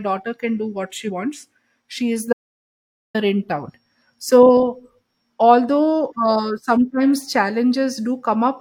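At 1.05 to 1.10 s, just before "wants she is", a brief glitch cuts through the speech. This is damaged data in a compressed stream. A short run of bytes was corrupted, so the decoder misread the frames there, lost sync, and jumped to the next valid frame header. The 50 ms or so of garbled output is the glitch.

After "wants she is", the speech cuts off abruptly at 2.33 s and returns mid-flow at 3.15 s. The gap in between is silence, with no room tone, and about 0.82 s of speech is simply missing. This is an audio dropout to silence. The likely cause is that the input signal was briefly lost, through a disconnected device, a failed link or a stray mute, while the recorder kept writing silence.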